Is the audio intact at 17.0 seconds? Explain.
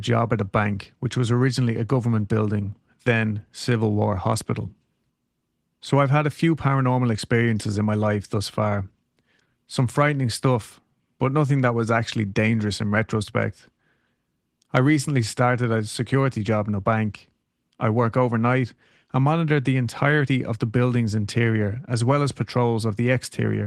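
Yes, the audio is intact at 17.0 seconds, with no fault at that moment.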